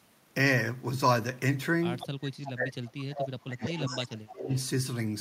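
Echo leak first appears at 1.99 to 2.07 s and returns at 2.45 to 2.52, 3.17 to 3.27, 3.63 to 4.06, 4.27 to 4.31 and 4.5 to 4.63 s. Each time, a copy of the speech trails the original by 199 ms, most likely because the far end plays the call over a loudspeaker and its echo canceller lets part of the pickup back through. The copy sits about 15 dB down in three of the bursts, rises to roughly 5 dB below the speech at 3.17 s, and fades to about 25 dB down in the last two.

Speech suppressed in double talk runs from 2.09 to 4.5 s, overlapping those echo bursts. While both sides talk, the speech ducks in pieces for roughly two seconds in total, dropping by as much as about 30 dB at its deepest. The likely cause is the canceller failing to tell the near talker from the returning echo and turning both down together, so the voice dips and chops out in places rather than staying steady.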